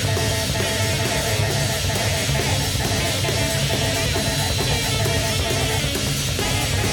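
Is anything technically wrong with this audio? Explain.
Yes. From 1.39 s to the end, a thin 4 kHz feedback whistle, slowly swelling and fading, sits roughly 20 dB below the sound, likely from a loudspeaker-to-microphone loop hovering at the edge of feedback.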